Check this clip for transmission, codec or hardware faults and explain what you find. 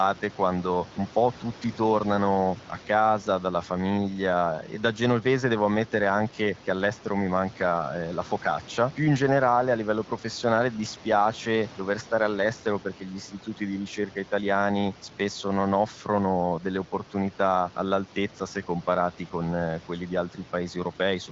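No transmission, codec or hardware faults are present.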